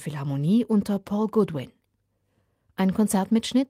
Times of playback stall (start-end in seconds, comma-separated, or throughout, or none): none